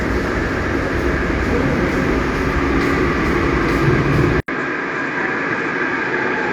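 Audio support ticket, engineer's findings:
Input path switched to a poorer device at 4.40 s, likely a change of microphone or capture profile mid-recording. About 80 ms of dropout at the switch, then a band-limited signal with nothing above 7.9 kHz, so the top end goes dull and boxy through to the end. Level drops by roughly 5 dB. The new device adds its own noise floor, sitting around 50 dB below the signal.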